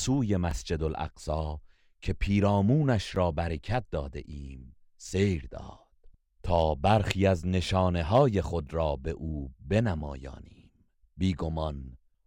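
The output buffer ran dry at 0.51 s and 3.16 s, fitting a 256-sample block, and each underrun with held sample froms the waveform flat for about 5 ms. About 5 ms of live audio was lost at each dropout.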